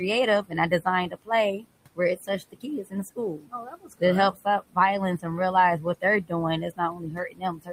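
Throughout, the noise suppressor pulls the room noise, which sits about 19 dB below the speech, down by about 21 dB. This produces noise suppressor artifacts: the background drops away between words and surges back underneath them.

From 0.42 to 4.02 s the suppressor mistakes parts of the speech for noise. It cuts them by up to about 21 dB, leaving roughly a second of swallowed, faint fragments. The same speech cut by the noise suppressor hits briefly at 4.33 to 4.77 s, just before "and realize", and again at 5.81 to 6.32 s, just after it. Each time, short pieces are turned down by about 20 dB. From 6.7 s to the end, the trailing speech is cut by up to about 20 dB and sounds faint.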